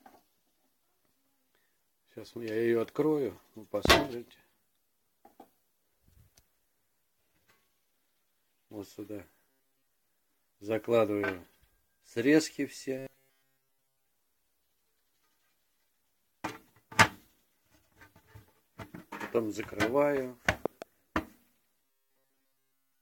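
Loud pops at 3.85–3.93 s and 20.66–20.84 s, each a pair of sharp pulses about 20 dB and about 15 dB above the audio, likely from voltage spikes such as a plug, switch or static discharge. Robotic sound from repeated short buffers at 9.50–9.90 s (partly), and at 12.98–14.08 s and 21.85 s to the end (fully), gives a rigid 134 Hz metallic buzz, likely from audio arriving too seldom so that roughly 7.5 ms chunks are replayed in place of the skipped signal.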